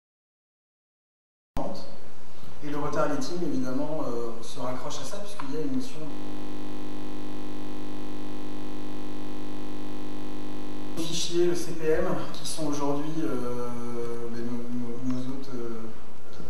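The audio opens with a cut-off start: from 0.00 s to 1.57 s there is nothing but digital silence, and at 1.57 s the sound begins abruptly partway through, with no natural attack or fade-in. The recording or stream plainly started late. On a waveform this shows as a flat line that jumps straight into the sound, and on a spectrogram as a blank region ending in a hard vertical edge. A DC offset runs through the whole clip. The waveform sits shifted away from the zero line by a constant amount, so positive and negative peaks are lopsided and some headroom is wasted. It can't be heard as such, but a spectrogram shows it as a steady band of energy pinned to the very bottom bin for the full duration. From 6.11 s to 10.97 s there is a system hang loop, where the machine or driver froze while the sound hardware kept replaying one piece of its ring buffer. Here that piece is 20 ms long, so it repeats 50 times a second. 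Over nearly five seconds that comes to roughly 240 passes, which fits a very short buffer. The result is a steady, static 50 Hz buzz rather than a stutter. On a spectrogram it looks like frozen horizontal harmonic lines spaced 50 Hz apart. On a zoomed waveform it is an identical cycle tiled end to end.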